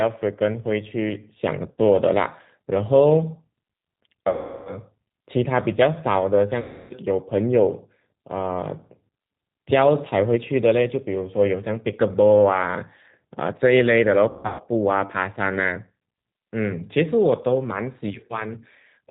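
The whole clip runs through the G.729 codec at 8 kbit/s, and you can plainly hear it: nothing above 4 kHz, and the speech has that rough, slightly synthetic edge from being rebuilt out of a vocal tract filter, a pitch predictor and a handful of pulses per frame.

On top of that there's VoIP packet loss concealed by the speech codec. The first is a short 60 ms gap at 1.72 to 1.81 s. Longer ones follow: 360 ms at 4.29 to 4.76 s and 300 ms at 6.60 to 6.93 s. Finally, at 14.29 to 14.62 s, 270 ms goes missing in patches over about 300 ms, with the longest run 150 ms. Each time the decoder stretches its last pitch and filter into a fading buzzy tone or coloured noise, and the speech stays weak or distorted briefly after packets return.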